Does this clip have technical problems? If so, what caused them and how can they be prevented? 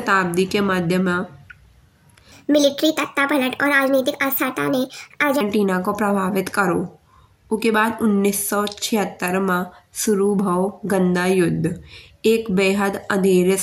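Yes. From 2.32 to 5.41 s the speech jumps up in pitch by about 5.6 semitones and runs 1.38 times too fast, the sign of a wrong sample rate. The samples are being read out faster than they were captured, which fits audio recorded at 32 kHz played back at 44.1 kHz without conversion. On a spectrogram, harmonics and formants shift upward in that span; the waveform looks squeezed in time. Prevent it by resampling whenever stream and device rates differ.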